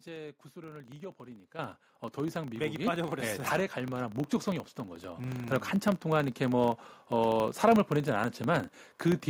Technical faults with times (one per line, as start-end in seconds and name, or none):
0.00-9.30 filter restarted on every block
1.59 microphone volume stepped up
2.85 microphone volume stepped up
5.16 microphone volume stepped up